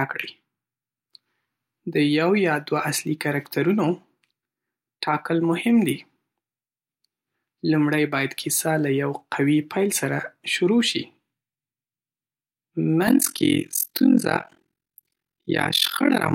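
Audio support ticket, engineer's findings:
Overlap-add ripple, 13.07 s to end: rough speech tremolo around 40 Hz, about 60 dB deep. Frame resynthesis windows overlap without summing to constant gain.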